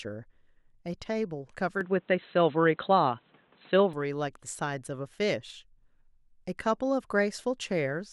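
At 1.81 s the speech suddenly goes dull and boxy, with nothing left above about 4.1 kHz, and it clears up again at 3.93 s. There's no gap at either switch. The level shifts by a few decibels and a faint new noise floor appears, sitting roughly 40 dB under the speech. That narrow band, changed tone and different background most likely mean the input switched to a poorer device for those two seconds before switching back.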